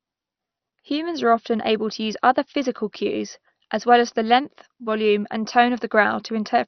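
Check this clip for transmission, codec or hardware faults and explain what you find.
One codec fault runs through the whole speech clip: MP2 compression, likely from a heavily squeezed MPEG Layer II stream, which fits a bitrate near 48 kbps. Starved of bits, the encoder switches off its upper sub-bands, so nothing survives above about 6.1 kHz. The bands that remain are coarsely quantised and flicker on and off, leaving the speech dull, with a gurgling, granular roughness.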